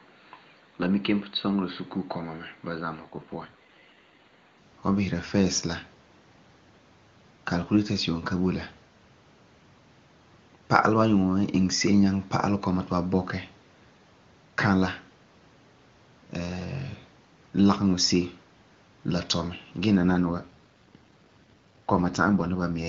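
From 0.0 to 4.58 s the sound is dull and boxy and a few decibels quieter. This is likely an input switched to a poorer device; the spectrogram shows nothing above 4.6 kHz, and the waveform is slightly smaller. Overlapping it, from 3.01 to 4.33 s, and again from 19.97 s to the end, an AMR rate drop from 23.85 to 8.85 kbit/s makes the sound rough and synthetic without any gap. The spectrogram shows smeared, grainy harmonics with the same bandwidth.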